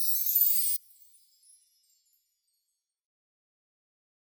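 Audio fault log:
0.76–4.25 s, one channel inverted: likely a polarity flip on one stereo side, so the shared centre cancels in mono and the sound drops by about 28 dB.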